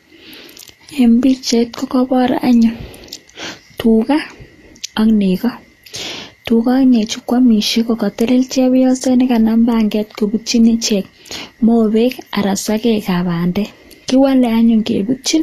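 A speech clip with plainly audible Vorbis compression throughout: nothing sounds above 14.2 kHz, and the remaining treble turns hissy and grainy, fitting a low bitrate near 36 kbps. Unlike a plain low-pass filter, the top end is not merely missing but replaced with noise-like roughness, likely from coarse residue quantisation.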